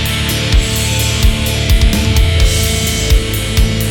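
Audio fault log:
No technical faults can be heard anywhere in the audio, and the signal stays intact and continuous throughout.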